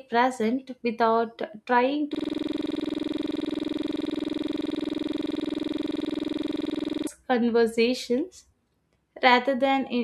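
A speech recording that, from 2.15 s to 7.07 s, locks into a rapid, rattling buzz: one 46.4 ms scrap of sound repeats identically over a hundred times, pulsing at 21.5 Hz, before normal speech resumes. This is a system hang loop. The computer or audio driver stopped supplying new audio, but the sound hardware kept replaying the same ring buffer, whose length fits a 2048-sample buffer, until the system recovered.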